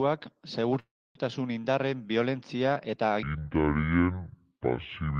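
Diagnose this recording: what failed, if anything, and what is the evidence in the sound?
From 0.79 to 1.17 s the speech halts while the last sound is stretched into a fading buzz and then about 0.28 s of silence. Nothing is lost afterward; the speech resumes where it stopped. This is a call audio freeze, likely network delay draining the jitter buffer, not packet loss.

From 3.23 s to the end, the speech plays at 0.582 times its proper speed, so it is slower and roughly ten semitones deeper throughout. Because pitch and tempo shift together, this is a section at the wrong speed, likely a clock mismatch at playback, not time-stretching.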